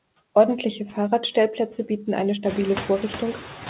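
From start to finish, the background noise dips slightly between phrases and swells back under the speech. These are noise suppressor artifacts: the suppressor pulls down the bands it judges to be steady noise by about 4 dB, frame by frame, so the noise floor pumps with the speech. The effect gets more noticeable once the room noise rises at around 2.5 s.

Also present across the whole clip is an uneven sense of tempo, with tiny hiccups in the flow of the speech. This comes from clock drift between sender and receiver. The sender's clock runs a few percent fast, so the receiver's jitter buffer keeps filling faster than it empties and has to be trimmed back again and again.

Between 0.09 and 3.24 s, those trims show up as repeated timing corrections. Short slices of audio are dropped at irregular intervals, always in the same direction, so playback runs at about 104 percent of normal speed. 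Each cut is small, heard as a slight skip or rushed moment rather than a clear gap, all within the narrow, 4 kHz-limited band of the call path.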